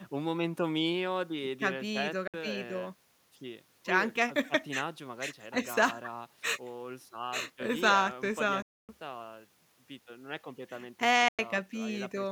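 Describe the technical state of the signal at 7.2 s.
At 7.2 s the signal is intact, with no dropout, clipping, glitch or other fault audible at that point.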